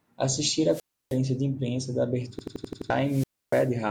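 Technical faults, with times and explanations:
0.70–1.18 s and 3.01–3.72 s, wireless microphone squelch dropout: Both times the radio link from the mic fades. You get a quick swell of hiss as the signal weakens, and then the receiver's squelch clamps the output shut, leaving a hole of near silence, about 310 ms the first time and about 290 ms the second. The speech comes back once the carrier is strong enough to reopen the squelch.
2.39–2.90 s, system hang loop: The machine stalls here while the audio hardware keeps replaying whatever was left in its ring buffer. The same 85 ms chunk plays six times in a row at about 11.7 Hz, giving a hard, machine-gun stutter rather than a buzz. That chunk length fits a 4096-sample buffer. Around half a second of real speech is lost and replaced by the repeats.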